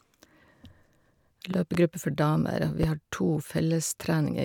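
A pair of loud pops sits over the speech between 1.54 and 1.77 s, peaking roughly 10 dB above it, then a single louder pop at 2.83 to 2.86 s, around 15 dB above. Both likely come from an electrical transient such as a switch or connector. The speech continues underneath.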